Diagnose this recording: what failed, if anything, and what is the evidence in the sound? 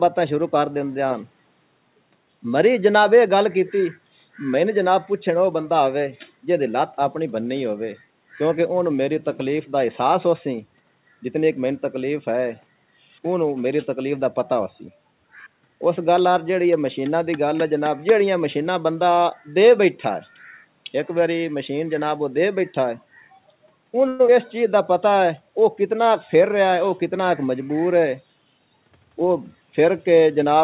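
At 24.08 to 24.21 s the sound stops moving forward and its last fragment is held as a buzz that fades over 112 ms, then resumes where it stopped. This is a call audio freeze in the network and buffer stage, likely the jitter buffer running empty when packets arrived late. The spectrogram shows smeared, repeating bands decaying across the gap, and the waveform shows a shrinking periodic pattern.

From 24.27 to 24.30 s there is a skip ahead. Around 70 ms of audio is dropped, and a 9 ms fill splices the two sides almost directly as the buffer sheds roughly 50 ms of built-up delay. The waveform shows an abrupt discontinuity, and the spectrogram, empty above 4 kHz from the G.711 A-law call path, shows a hard vertical seam with no gap.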